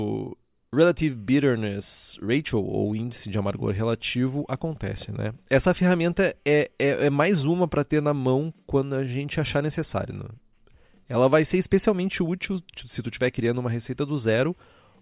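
No technical faults can be heard anywhere in this speech recording. There is no moment in the audio that needs a timestamp or further comment.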